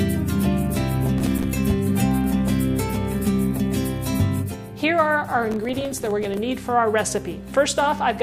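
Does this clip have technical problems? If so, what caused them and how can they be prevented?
Yes. Processor overload crackle occurs from 1.18 to 1.46 s and from 5.52 to 6.37 s: missed buffer deadlines, each leaving a silent gap of roughly 3 ms, about twenty per burst, produce gritty tearing. Prevent it with larger buffers or less concurrent processing load.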